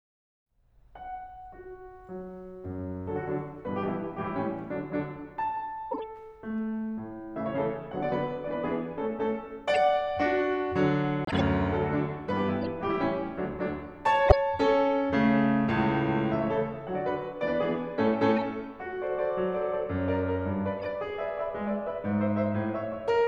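Bit errors in the compressed stream reach the decoder, which plays the damaged frames anyway as corrupt frame decoded faults. Misread gains and codes push energy into the wrong frequencies, so the music is briefly overlaid with a chirp or burst of noise lasting about as long as the bad frames: 5.91 to 6.03 s, then a short blip at 9.74 to 9.77 s. At 11.25 s the decoder rejects a run of damaged frames and the player substitutes silence, a corrupt frame muted fault. The music drops out abruptly for 0.16 s, until 11.41 s, without losing its timing; that length fits a handful of frames of roughly 27 ms each. Decoded corruption returns as a faint blip at 12.63 to 12.65 s. At 14.27 to 14.34 s it becomes a loud burst, peaking around -5 dBFS. Two more faint ones follow, at 18.36 to 18.41 s and 20.80 to 20.86 s.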